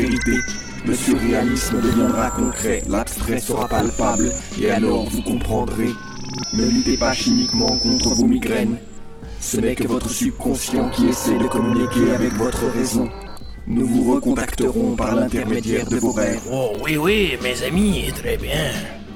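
Overlapping chunks cause a brief stutter at six evenly spaced joins: 1.64–1.66, 4.66–4.68, 7.68–7.71, 10.71–10.73, 13.73–13.75 and 16.75–16.77 s. The audio was handled in roughly 3 s blocks, each starting about 21 ms before the previous one ended, so that sliver plays twice. Unlike a dropout, nothing goes missing. The sound repeats briefly, and the strict 3 s rhythm rules out random glitches.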